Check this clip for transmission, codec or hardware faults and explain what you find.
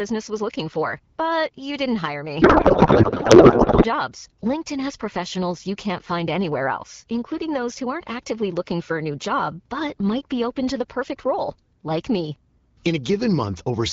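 One transmission fault occurs, a codec payload misread from 2.41 to 3.86 s, starting just after "you didn't hire". The AMR-WB stream, coded at 12.65 kbit/s, arrives packed in octet-aligned form, with each field padded out to byte boundaries, but the receiver unpacks it as bandwidth-efficient, with the fields packed tightly. Every field is therefore read from the wrong bit position. The decoder still produces sound, but for those 1.45 seconds the speech turns into garbled noise and warble that barely tracks what was said.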